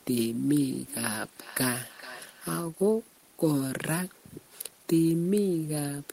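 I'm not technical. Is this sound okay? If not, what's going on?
No, there's a feedback echo between two devices from 0.42 to 2.76 s. Two devices in the same room are on the call, so one picks up the other's playback and sends it back. Each bit of speech returns faintly, just under half a second later.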